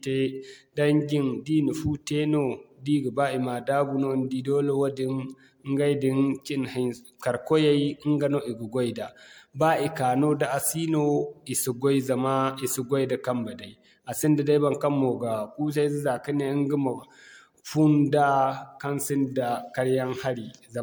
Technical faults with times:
0.00-20.82 generation loss

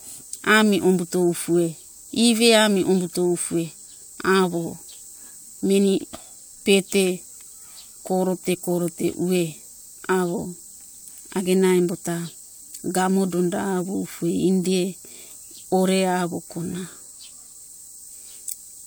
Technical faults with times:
none

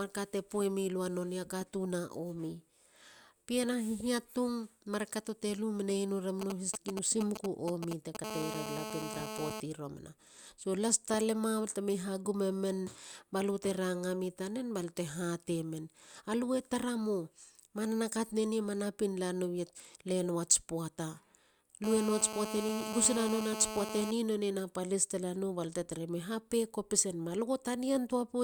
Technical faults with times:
6.41-8.17 GSM signalling bursts
8.24-9.60 GSM phone buzz
21.84-24.11 GSM phone buzz

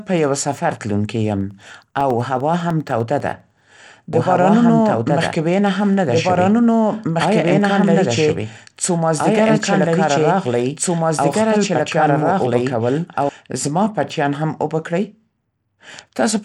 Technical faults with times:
0.00-16.44 Bluetooth SBC compression
1.31-3.50 periodic USB or driver dropouts
4.13-13.29 doubled audio track

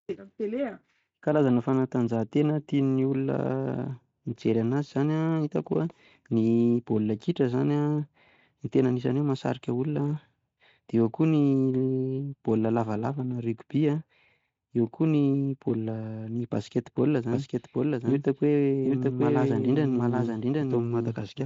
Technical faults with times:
17.32-21.45 doubled audio track

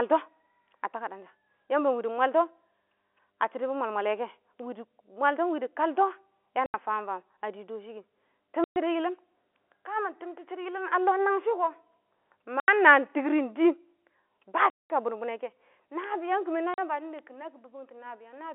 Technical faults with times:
0.00-18.55 mains hum
4.59 bit error spike
6.66-6.74 packet loss filled with silence
8.64-8.76 packet loss filled with silence
12.60-12.68 packet loss filled with silence
14.70-14.90 packet loss filled with silence
16.04 bit error spike
16.74-16.78 packet loss filled with silence
17.19 bit error spike

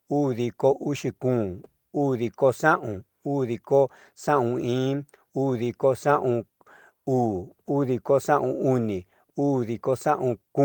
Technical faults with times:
none

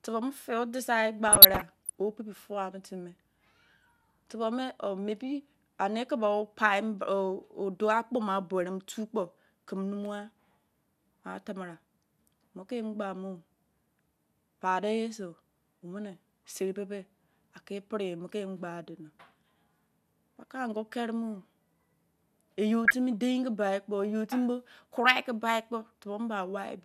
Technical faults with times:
1.28-1.90 DAB burbling
3.79-4.23 DAB burbling
22.85-22.94 DAB burbling

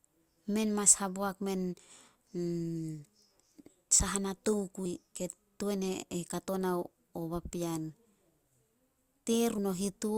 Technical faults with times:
4.85 compressed frames skipped
9.58 compressed frames skipped

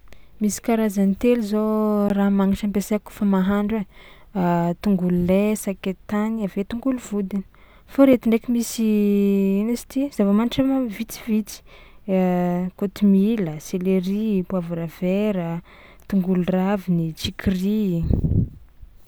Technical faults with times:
2.09 underrun with held sample
3.20 underrun with held sample
8.13 underrun with held sample

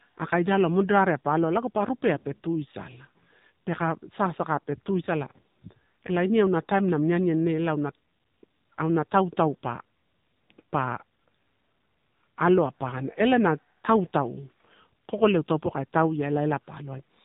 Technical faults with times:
0.00-17.24 AMR narrowband mobile codec

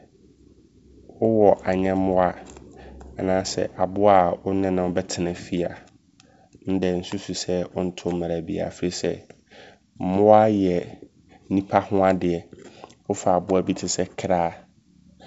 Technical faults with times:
none

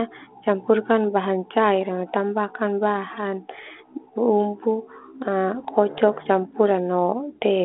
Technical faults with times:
3.54-3.71 bit errors on an ADPCM link
5.54-5.67 bit errors on an ADPCM link

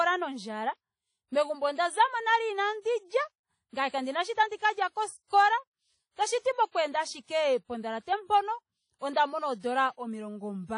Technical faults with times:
0.00-10.78 WMA compression

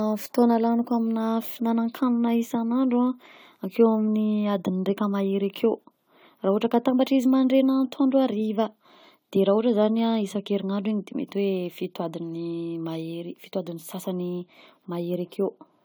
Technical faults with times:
0.00-15.84 generation loss

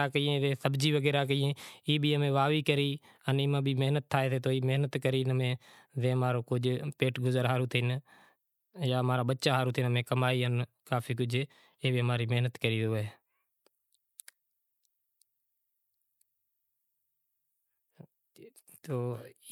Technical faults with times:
none

